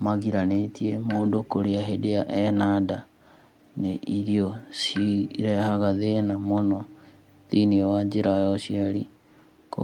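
Nothing in this recording stands out as a technical fault at any point, so there's no problem to walk through here.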